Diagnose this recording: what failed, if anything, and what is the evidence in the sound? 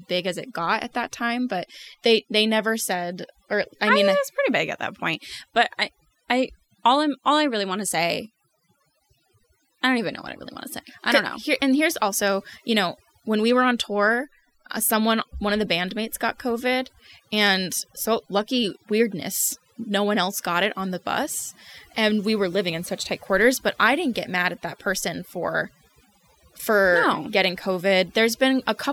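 Overdone noise removal runs through the whole recording, at the call-processing stage. Between phrases the background drops to near silence scattered with twinkling, chirpy specks. The noise suppressor was set far too aggressively: any frequency band close to its noise estimate is pulled down hard or switched off. That removes the quieter parts of the voice along with the noise and leaves isolated bands flickering on and off.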